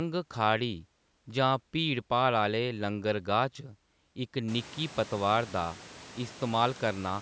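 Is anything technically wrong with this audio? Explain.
No, nothing here is technically wrong with the audio.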